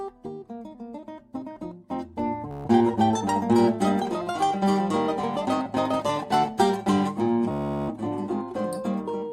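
Bluetooth stutter occurs at 2.51 to 2.68 s and again at 7.51 to 7.91 s in this music. Packets failed to arrive in time, so the receiver kept replaying its last short slice of audio, roughly 14 ms each, producing a rapid machine-gun buzz. When data resumes, the music jumps ahead as if it had kept playing, skipping about 140 ms at the first dropout and about 380 ms at the second.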